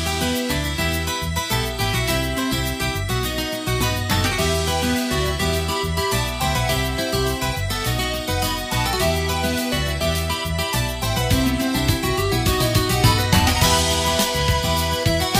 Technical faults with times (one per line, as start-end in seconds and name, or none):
0.00-8.93 sample clock jitter